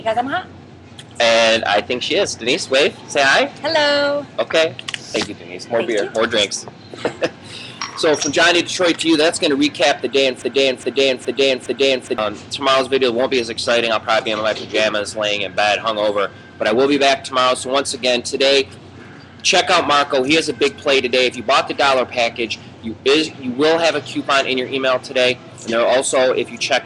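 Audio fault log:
10.42–12.18 s broken-record loop: a 414 ms fragment plays four times, identical and undecayed unlike echo, likely a stalled stream resending it; the audio in between is lost.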